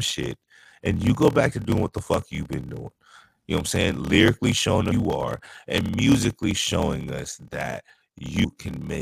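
A block size mismatch (padded) runs through this speech: each 1024-sample block is zero-filled to what sounds like 1152 samples, giving a 38.3 Hz buzz and playback at 0.889 speed, pitch about unchanged. Damaged data in the compressed stream makes the decoder lose sync briefly, heard as short glitches at 4.90 s and 8.43 s.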